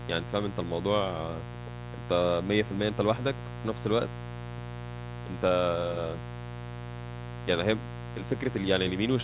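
A mains buzz runs through the whole speech clip: switching spikes at twice the 60 Hz mains rate, heard as a raspy, harmonic-rich rasp only about 10 dB below the speech. That rasp sets it apart from a smooth hum. The buzz stays within the call path's 4 kHz ceiling, which fits a narrowband G.711 link.

From 5.48 to 5.52 s there is a short concealed packet loss. About 20 ms never arrived, and the receiver extended the preceding sound to fill the gap, leaving a brief smear rather than the hard silence of a dropout.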